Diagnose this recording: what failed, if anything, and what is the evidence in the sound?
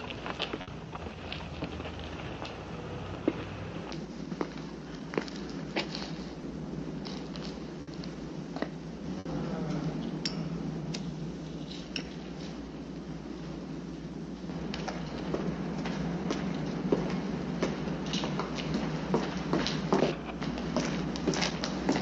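The network stage failed, with a burst of packet loss at 0.61–0.70 s, 7.81–7.90 s and 9.19–9.28 s. Each time, about 60 ms of sound is concealed by extending and fading the last sound. On a spectrogram this shows as smeared, decaying bands. Then about 60 ms is skipped outright, leaving a visible splice in the waveform.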